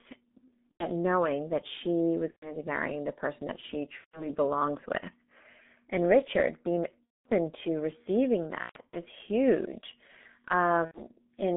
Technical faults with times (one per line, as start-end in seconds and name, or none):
0.00-11.56 G.723.1 codec
0.71-0.89 VoIP packet loss concealed by the speech codec
2.30-2.58 VoIP packet loss concealed by the speech codec
3.98-4.31 VoIP packet loss concealed by the speech codec
7.05-7.29 VoIP packet loss concealed by the speech codec
8.63-8.96 VoIP packet loss concealed by the speech codec
10.85-11.07 VoIP packet loss concealed by the speech codec